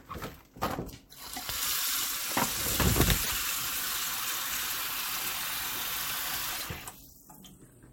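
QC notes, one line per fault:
3.20–3.31 s and 6.52–6.63 s, damaged data in a compressed stream: each event is a brief chirp, squawk, click or short hole lasting about 0.11 s. Corrupted bytes in the compressed stream make the decoder misread those frames and lose sync, so it outputs garbled sound or a gap until it finds the next valid frame header.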